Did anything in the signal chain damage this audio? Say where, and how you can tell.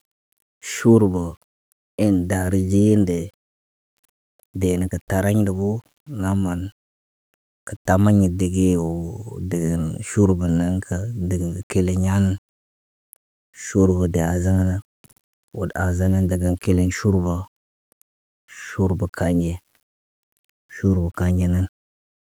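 Yes. Grainy distortion that follows the speech throughout, roughly 40 dB down, points to sample-format conversion, likely low bit depth without dither (9-bit rounding). Spectrograms show level-tracking hash; waveforms show stair-steps.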